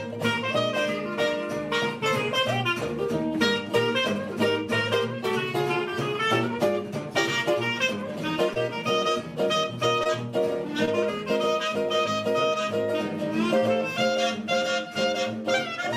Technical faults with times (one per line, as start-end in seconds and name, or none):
8.53-8.57 short concealed packet loss
10.03-10.07 short concealed packet loss
10.85-10.89 short concealed packet loss